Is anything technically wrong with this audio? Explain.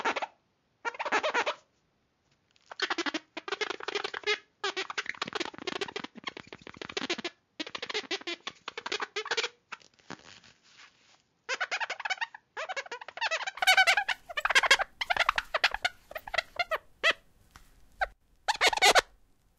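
Yes. From 0.0 to 13.59 s the input likely switched to a poorer device, narrowing the band to nothing above 7.1 kHz. The sound turns dull and roughly 10 dB quieter, with a new noise floor about 40 dB down.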